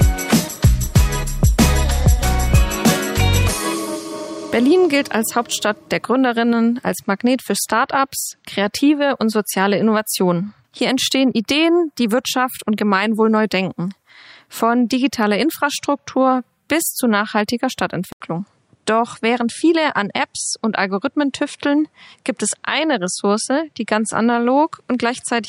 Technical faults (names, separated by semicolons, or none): input switched to a poorer device